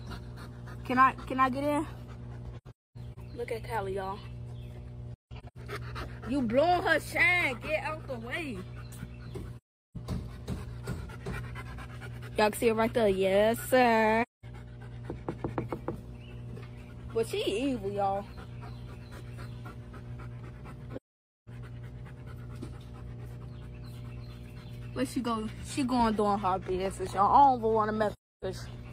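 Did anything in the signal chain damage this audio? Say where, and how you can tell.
Yes. Mains hum runs through the whole clip as a steady 60 Hz tone sitting about 15 dB below the signal. This points to the analogue wiring: a ground loop or nearby transformer is letting the power line leak into the signal before conversion.

AAC frame loss with muting appears at 2.57–3.18, 5.14–5.57, 9.56–9.96, 14.22–14.45, 20.95–21.49 and 28.13–28.44 s. These are soft-faded gaps, from about 210 to 510 ms long. Lost coded frames were zeroed by the decoder.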